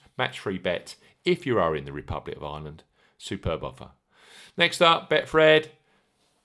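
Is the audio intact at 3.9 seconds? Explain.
Yes, at 3.9 seconds the speech runs through intact, with no dropout, click, distortion or other fault at that moment.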